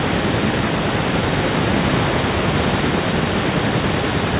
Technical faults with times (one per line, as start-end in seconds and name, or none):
none